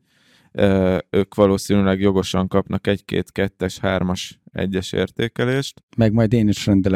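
No dropouts, clicks, distortion or level jumps can be heard at any point in the recording.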